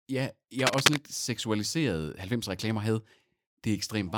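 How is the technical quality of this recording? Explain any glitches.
Cable scratch noise runs from 0.59 to 0.98 s, a short burst of scratchy, rustling crackle laid over the speech and somewhat louder than it. It likely comes from a worn cable, connector or control being moved, so that the contact resistance jumps about rapidly and injects dense, irregular noise into the signal. For that fraction of a second the speech sits under a rough, uneven scraping texture.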